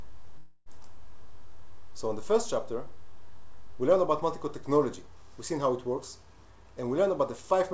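A call audio freeze runs from 0.38 to 0.69 s: the sound at 0.38 s stretches into a buzz that fades. On a spectrogram it shows as horizontal smears, likely from delayed packets draining the jitter buffer. About 283 ms of gap is inserted, nothing is lost, and playback resumes where it stopped. From 6.04 s to the end, a jitter buffer speed-up trims short pitch-period chunks, about a tenth of a second in total. Playback runs about 5% faster at unchanged pitch and sounds slightly hurried. The waveform shows tightly packed cycles without visible gaps. Throughout, the G.722 call path leaves nothing above 8 kHz.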